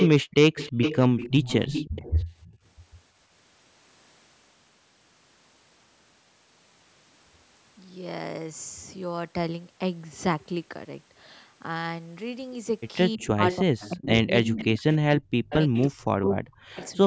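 From 0 to 2.56 s an echo leak is heard: a copy of the voice, about 10 dB down, trailing the speech by 0.32 s. The likely cause is a far-end loudspeaker echo that its canceller failed to remove. On a spectrogram the harmonic pattern repeats, weaker and shifted right by that delay.

The echo returns at 13.21–14.08 s (about 15 dB down), 14.45–14.96 s and 15.5–15.82 s (about 10 dB down), and 16.75–16.93 s (about 25 dB down).

Overlapping these, speech is suppressed in double talk at 13.17–14.67 s and 15.0–16.77 s. The voice dips and breaks into pieces, falling by up to roughly 30 and 40 dB. This is likely because the canceller could not separate the talker from the echo and turned both down. The waveform shows abrupt notches in the envelope, and the spectrogram shows gaps or faded upper bands.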